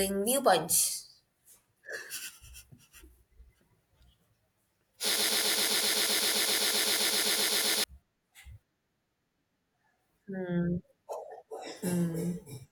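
From 5.16 to 7.84 s a 0.13 s fragment repeats 21 times, a broken-record loop, likely from a stalled stream replaying its last fragment.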